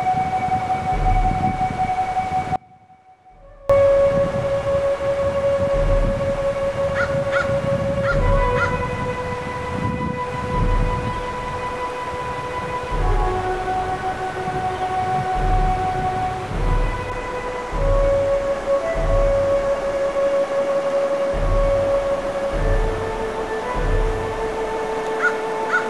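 At 2.56 s the sound abruptly drops out for about 1.14 s, leaving only a faint residue roughly 25 dB down until 3.70 s. That's likely an audio dropout to a faint residue.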